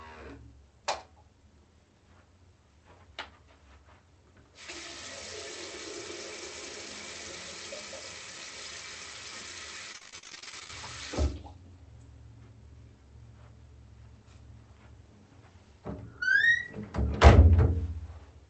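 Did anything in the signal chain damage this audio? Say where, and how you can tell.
Yes, in the network stage of the call path: repeated packet loss (robotic sound) from 9.92 to 10.73 s. Dozens of short dropouts, none longer than about 42 ms, were patched by extending the preceding sound, so nearly half that stretch is synthetic and choppy.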